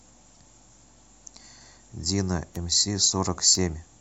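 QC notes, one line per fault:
0.33–0.37 s, damaged data in a compressed stream: for about 40 ms the decoder is fed corrupt frame data, misreads it, loses sync and hunts for the next valid frame header, so a short glitch replaces the sound.
2.56 s and 3.55 s, bit error spikes: at each time a single sample has one flipped bit, so its value jumps by a power of two and snaps straight back. Each is heard as one sharp tick with no relation to the surrounding sound. On the waveform each appears as an isolated one-sample needle. On a spectrogram each is a thin vertical line spanning the whole frequency range.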